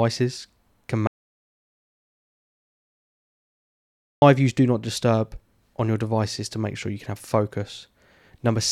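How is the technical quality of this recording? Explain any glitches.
The recording has one serious glitch. An audio dropout to silence from 1.07 to 4.22 s cuts the speech to dead silence with no room tone until "use do not disturb". The input was likely lost while the recorder kept writing silence.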